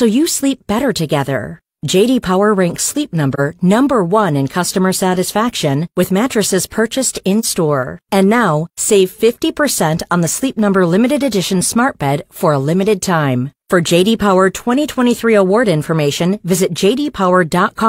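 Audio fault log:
3.34–3.40 s and 7.39–7.45 s, AAC frame loss with muting: the speech dips briefly twice, each time by about 43 ms, which fits a single lost AAC frame. The decoder zeroed that frame's spectrum, and the overlapping transform windows fade the sound out and back in across the gap. That gives each dip soft edges, unlike a hard sample dropout, where the audio switches off and on abruptly at the boundaries.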